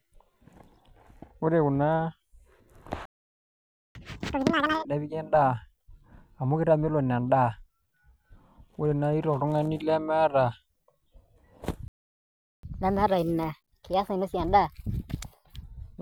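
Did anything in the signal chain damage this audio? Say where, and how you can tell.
Yes, at the playback stage. There's a playback stall at 3.05 to 3.95 s, about 0.9 s of dead silence mid-speech, and another from 11.88 to 12.63 s, about 0.75 s. Likely the player ran dry of buffered data or its thread got blocked.

Right after each gap you get catch-up at higher speed: the player resamples its backlog to win the lost time back. From 3.95 to 4.85 s it runs at 2x, pitch up roughly ten semitones, then from 12.63 to 15.63 s at 1.25x, about four semitones high, before settling.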